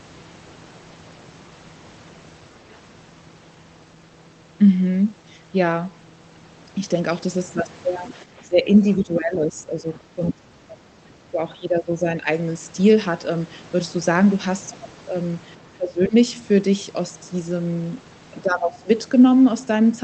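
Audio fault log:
8.08–8.13 s, other side's voice leaking through: residual echo likely escaped the echo canceller, so a brief faint second voice, about 20 dB below the talker, slips in.
8.23–9.9 s, 10.15–10.41 s, 10.68–10.94 s, 11.31–12.26 s, 15.76–16.14 s, 18.43–18.89 s, speech suppressed in double talk: with both sides talking at once, the echo canceller likely attenuated everything, so the talker's voice sinks by about 10 to 20 dB.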